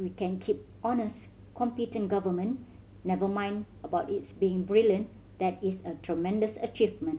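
No technical faults heard.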